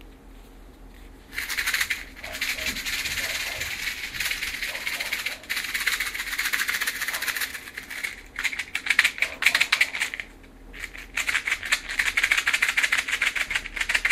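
DAB burbling affects this everyday-sound recording at 1.96 to 2.09 s, 4.24 to 4.47 s and 13.62 to 13.84 s, as short bursts of watery, bubbling blips over the sound. Weak digital radio reception is the cause. Bit errors, at a rate of a fraction of a percent, slipped past error correction into the MP2 audio data. The corrupted samples then decode as brief noise blips confined to individual frequency sub-bands across several consecutive frames.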